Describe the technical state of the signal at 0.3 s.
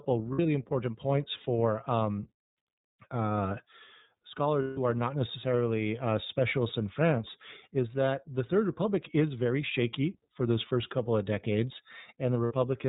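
Around 0.33 to 0.39 s the speech stops being articulated and turns into a held, slightly buzzy, breathy vowel-like tone. This is lost iLBC frames. Packets went missing, and the decoder filled the gap by repeating the last pitch cycle blended with noise. The dropout runs about 60 ms, which fits two 30 ms frames. Because each iLBC frame is decoded on its own, the voice snaps back to normal right after 0.39 s.

At this moment, as across the whole clip, the sound is band-limited and a little rough and synthetic, with nothing above 4 kHz. This is the iLBC codec itself. It is a narrowband VoIP coder that models each frame's excitation independently, here in 30 ms frames, and the plainly audible coarseness fits its 13.33 kbps mode.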